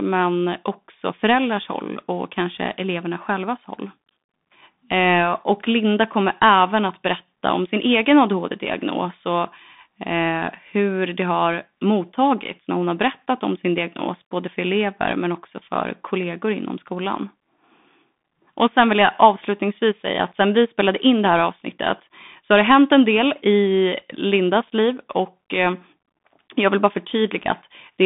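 A Bluetooth CVSD headset codec applies throughout, coding one bit per sample so that nothing above 3.8 kHz survives. The speech sounds thin and band-limited, with scratchy s sounds and granular hiss.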